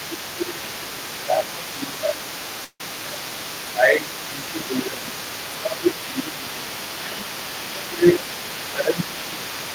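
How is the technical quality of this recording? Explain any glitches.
Quality's pretty rough. The talker keeps getting ducked, there's a second voice in the background, and one short gap.

Speech suppressed in double talk hits at 0.0–0.65, 1.18–2.35, 3.01–3.55, 3.71–5.21, 5.56–7.26, 7.65–8.21 and 8.71–9.74 s. The voice sags by roughly 10 to 15 dB, likely because the echo canceller couldn't separate it from loudspeaker echo.

The other side's voice leaking through runs the whole clip, sitting around 15 dB under the talker. It's likely echo the canceller didn't fully remove from the mic.

A long network dropout at 2.64–2.81 s loses about 150 ms. The last sound is stretched into a fading buzz, then about 40 ms of silence before the audio picks up again. Packet loss is the likely cause.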